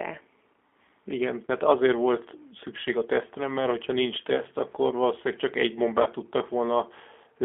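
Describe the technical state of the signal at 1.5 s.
Around 1.47 to 1.50 s, a stretch of the VoIP stream went missing, about 20 ms of audio, which fits a single lost packet. The speech codec covered the gap with packet loss concealment, repeating its last pitch period and vocal tract filter at falling gain. The speech there briefly turns into a buzzy tone or coloured noise that sags in level. Because each frame is predicted from the one before, the speech sounds weak or distorted just after the gap.

The whole call, including this moment, also passes through the G.729 codec, here the G.729A variant, which suggests the usual 8 kbit/s rate. It rebuilds speech from a vocal tract filter, a pitch predictor and a few pulses per frame. The line is band-limited to roughly 250 Hz to 3.5 kHz, so the sound is muffled and thin, and the codec damage is plainly audible as a rough, synthetic grain.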